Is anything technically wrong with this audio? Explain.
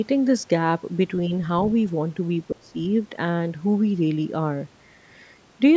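Yes. Speech suppressed in double talk occurs from 2.52 to 2.75 s, most likely because the far end was talking at the same moment and the echo canceller could not tell the local talker from the loudspeaker echo, so it turned everything down. For roughly a fifth of a second the speech sinks by a deep margin, around 25 dB at its lowest. The call microphone processing itself is working, with nothing above 8 kHz.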